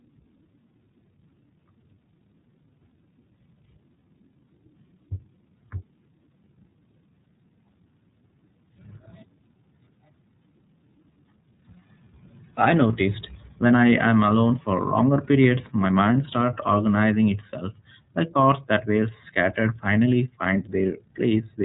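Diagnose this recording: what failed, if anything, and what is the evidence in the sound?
The failure is at the codec stage: the speech has passed through the iLBC codec for its whole length. Nothing above about 3.8 kHz survives, and the voice has a plainly audible rough, synthetic grain. That roughness fits 30 ms frames coded independently at 13.33 kbps, with each frame's excitation rebuilt without reference to the one before. A simple narrowband filter or telephone line would remove the same top band but leave the voice smooth.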